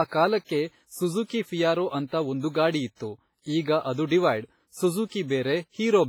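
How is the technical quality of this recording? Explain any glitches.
Quality is poor throughout, with heavy codec damage across the whole speech clip. The likely cause is WMA compression at a low bitrate, consistent with around 24 kbps. Long transform blocks smear quantisation noise, leaving ringing, washy speech with hiss that breathes alongside it.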